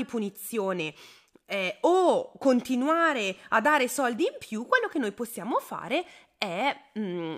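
A speech clip with a single sharp click at 5.82 s, just after "quello che noi possiamo". It is likely dropped samples: a fraction of a millisecond missing from the stream, so the waveform jumps abruptly to a later value, leaving a thin vertical line across the spectrum.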